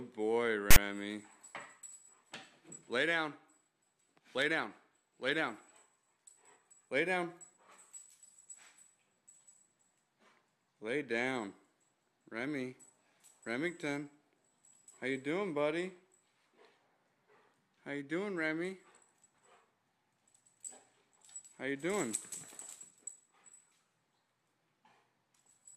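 File tags played as audio appear from 0.71 to 0.76 s, a burst of about 56 ms. A block of text metadata has been decoded as though it were sample data, so character codes become waveform values. Because text bytes cluster in a narrow range, the result is a loud, harsh rasp sitting offset to one side of zero rather than centred noise, and it starts and stops abruptly with hard edges.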